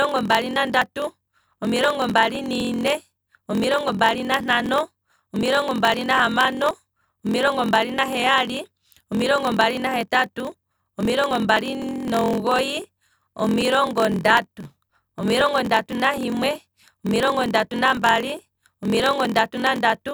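Speech with two faults running through it. A block size mismatch (padded) runs for the whole clip: each block arrives shorter than the 1024 samples the next stage reads, which fits a 1024-sample read buffer, and the remainder is zero-filled. The result is a 43.1 Hz buzz and delivery slowed to 0.938 times normal speed at roughly normal pitch. On a waveform the zero gaps appear as regular notches, and a spectrogram shows vertical stripes every 23 ms. Periodic USB or driver dropouts also start at 0.31 s and continue every 0.24 s to the end. Each one skips a sliver of audio, heard as a regular tick whenever there is signal. These show as thin broadband vertical lines on a spectrogram and as abrupt jumps in the waveform.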